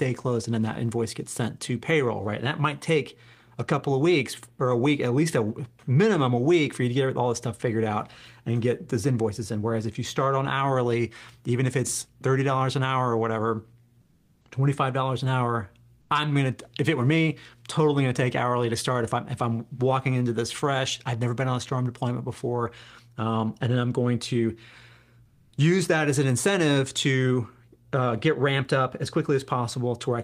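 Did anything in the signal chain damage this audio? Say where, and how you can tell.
Yes, at the codec stage: comfort noise in place of the background, twice. From 14.05 to 14.41 s and from 25.27 to 25.51 s the real room tone turns flat and featureless, about 7 dB and about 2 dB quieter. That's likely Opus DTX synthesising filler noise during pauses.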